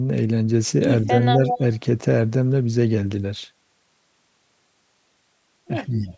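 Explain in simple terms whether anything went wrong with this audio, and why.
Two things went wrong, each twice.

The first is speech suppressed in double talk. Between 1.16 and 1.61 seconds, and again between 5.93 and 6.07 seconds, the talker's voice briefly dips. It gets a little quieter for a short moment. The likely cause is that both people spoke at once. The call's echo canceller could not tell the talker apart from the other side's sound. So it turned everything down for a moment.

The second is an echo leak. From 1.46 to 1.59 seconds, a delayed copy of the voice can be heard. It arrives about 188 milliseconds late and is fairly strong. It returns from 5.94 seconds to the end, but much fainter there. One side was probably playing the call through a loudspeaker. Its microphone picked that sound up again. The echo canceller failed to remove all of it, so part of the echo was sent back.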